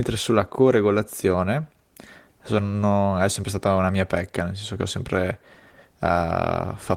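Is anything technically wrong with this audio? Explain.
No, nothing is technically wrong with this speech recording. No faults can be heard anywhere in it.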